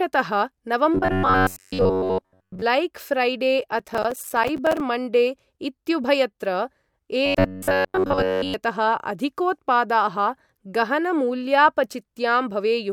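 Robotic sound from repeated short buffers runs from 0.95 to 2.63 s. The speech becomes a rigid, metallic buzz at about 94 Hz that only loosely tracks the words. The likely cause is new audio arriving too rarely, so the playback loops a fragment of roughly 10.7 ms and skips most of the real signal.

Processor overload crackle follows from 3.79 to 4.80 s. It is a gritty burst of tearing over the speech. Many buffer deadlines are missed in a row, and each miss drops in a sliver of silence with hard edges. The spacing points to buffers of around 5 ms.

The same robotic buzz at about 94 Hz returns from 7.26 to 8.54 s.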